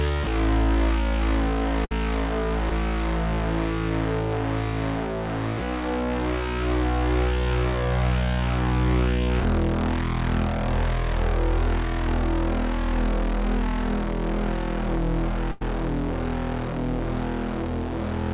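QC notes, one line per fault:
1.85–1.92 s, burst of packet loss: roughly 60 ms drops out; the receiver stretches the last sound into a fading tail, then jumps ahead past the gap.
2.70–2.72 s, short concealed packet loss: about 10 ms never arrived in time, so it's patched by extending the preceding sound, leaving a quick smear.
15.52–15.62 s, burst of packet loss: a longer 90 ms hole, filled by continuing and fading the last sound before playback resumes further on, with the middle chunk gone.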